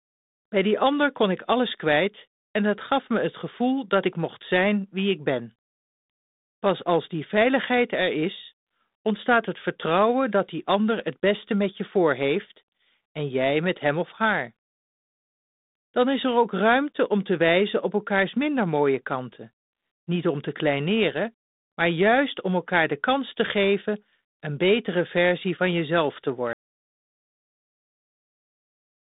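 Speech heard over a G.726 ADPCM telephone-band path at 32 kbit/s, so nothing reaches above 3.8 kHz, cuts out in an audio dropout to silence from 26.53 s to the end, right after "versie van jezelf te". The waveform drops to a flat line of silence and the spectrogram goes completely blank, with no room tone, likely because the input was lost while recording continued.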